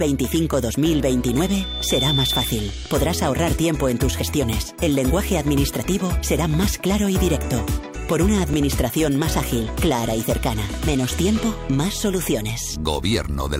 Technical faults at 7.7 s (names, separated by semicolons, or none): none